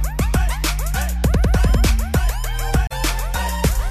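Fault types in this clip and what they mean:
Corrupt frame concealed, 2.87 to 2.92 s: for about 54 ms the sound is covered by the decoder's concealment. A burst of bit errors damaged part of the AAC stream, and the decoder caught the bad data and papered over it, either by muting the gap or by reusing the last clean spectrum with scrambled signs. The gap's length suggests two damaged frames.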